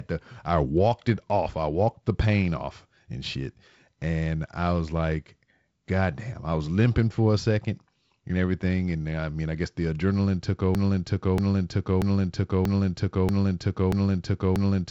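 A broken-record loop begins at 10.75 s, right after "guess the adrenaline took", and runs to the end of the clip. A fragment of about 0.64 s repeats exactly, back to back, seven times, with no variation between passes. The likely cause is a stalled player or stream that kept resending the last chunk it held, so whatever speech should have followed is lost. Through the loop, the wideband telephone coding stays audible, with nothing above about 7.7 kHz.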